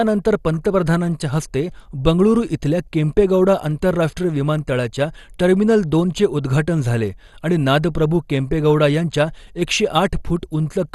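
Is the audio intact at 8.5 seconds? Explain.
No. At 8.5 seconds, as across the whole clip, the speech likely passed through MP2 compression at a low rate near 64 kbps, so upper sub-bands were starved of bits and shut off. Nothing remains above 12.2 kHz, leaving the speech dull with a gurgling, granular edge.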